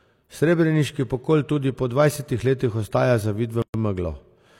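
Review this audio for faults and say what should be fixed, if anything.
A gap at a join of encoded pieces runs from 3.62 to 3.74 s. The speech was encoded in separate pieces, apparently about 4 s long, then joined without trimming each run's leading encoder delay and padded final frame. The leftover samples open a silence of roughly 120 ms in the middle of continuous speech, with smeared edges, after which the speech resumes where it stopped. To prevent it, trim encoder delay and padding at every join, or encode the audio as one continuous stream.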